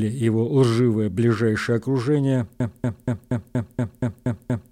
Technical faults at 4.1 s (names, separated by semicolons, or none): broken-record loop